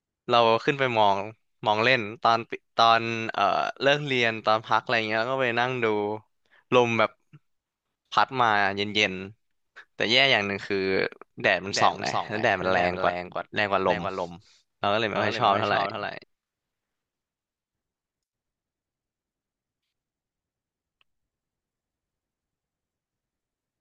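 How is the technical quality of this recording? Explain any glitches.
The recording has a doubled audio track from 11.44 to 16.24 s. A second copy of the speech trails about 300 ms behind, roughly 5 dB quieter. It likely comes from a slower second capture path. The copy starts and stops abruptly and has no room decay.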